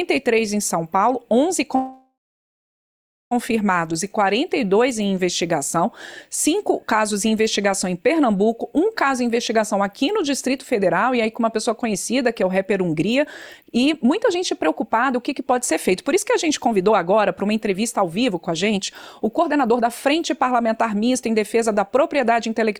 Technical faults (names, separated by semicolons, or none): call audio freeze; jitter buffer speed-up